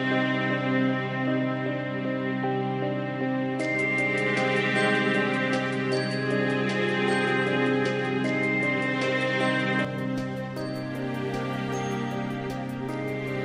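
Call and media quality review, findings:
Input switched to a poorer device, 0.0–9.85 s: nothing above 10.5 kHz, level about 5 dB off, faint new noise floor; clears at 9.85 s, no gap, likely device change.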